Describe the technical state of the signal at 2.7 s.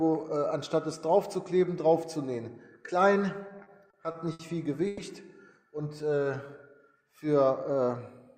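Nothing is wrong with the signal at 2.7 s; it runs intact through that moment.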